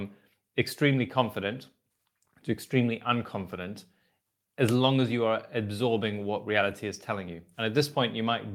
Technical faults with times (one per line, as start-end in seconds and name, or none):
none